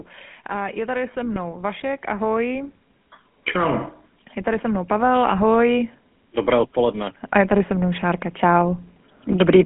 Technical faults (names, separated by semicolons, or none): GSM full-rate codec; automatic gain rising; lost GSM frames